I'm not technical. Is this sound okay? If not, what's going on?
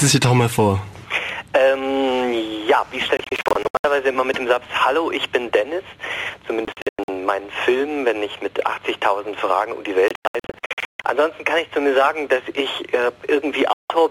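No. There are four bursts of digital broadcast dropout, at 3.17 to 3.85 s, 6.65 to 7.09 s, 10.08 to 11.05 s and 13.73 to 13.91 s. The receiver stopped getting usable data and went silent until good data returned. In the first three, the sound breaks into several short gaps of up to 0.14 s. The last is one brief hole. Whatever played during those gaps is gone.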